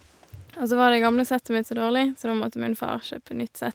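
No faults detected anywhere in the speech clip.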